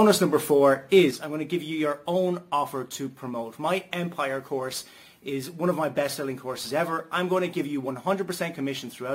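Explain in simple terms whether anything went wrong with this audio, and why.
One channel drops out, likely from a lost stereo feed, at 1.11 s until the end. The sound suddenly becomes quieter.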